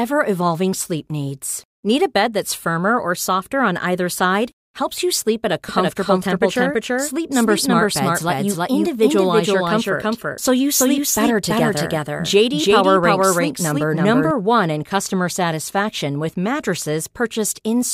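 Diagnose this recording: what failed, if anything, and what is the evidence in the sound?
Doubled audio track, 5.69 to 14.31 s, after "you sleep at a". An equally loud, dry copy lags about 0.3 s, likely from a slower second capture path.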